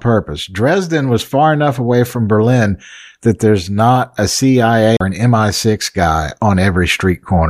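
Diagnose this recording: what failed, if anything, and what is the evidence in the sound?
A CD skip at the playback stage. Around 4.97 to 5.01 s the speech ticks, drops out for roughly 40 ms, then picks up from a different spot. The laser lost its track and landed on another turn of the disc's spiral.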